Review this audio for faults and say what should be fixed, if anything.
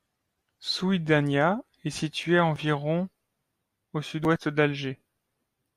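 Nothing needs fixing, since the speech signal holds steady throughout with no audible technical fault at any point.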